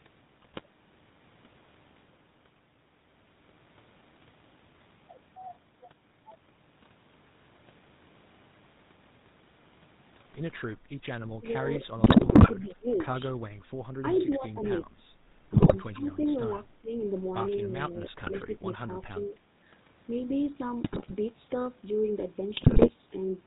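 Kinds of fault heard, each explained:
GSM full-rate codec: The whole clip has that buzzy, gravelly edge of the old 13 kbps GSM full-rate codec, which rebuilds the voice from a vocal-tract filter fed with sparse pulses, and nothing comes through above 4 kHz, so everything sounds thin and rough.
GSM bit errors: Corrupted bits reached the decoder, so the filter, pitch or gain values went wrong for 8 to 22 frames and the speech breaks into squawks, pops and gargling around 0.42, 12.04, 15.54, 18.23, 20.84 and 22.54 s, each burst lasting a fraction of a second.
Speech suppressed in double talk: The voice dips by up to about 20 dB, dulls or drops out in pieces from 11.39 to 12.91 s, 14.02 to 15.17 s, 15.93 to 16.93 s, 17.81 to 18.91 s and 19.26 to 19.39 s, likely an echo canceller ducking everything while both sides talk.
Echo leak: At 14.15 s there's a brief, faint scrap of the voice coming back about 377 ms late and well below the main level, likely loudspeaker pickup on the far end that the echo canceller didn't fully remove, sent straight back down the line.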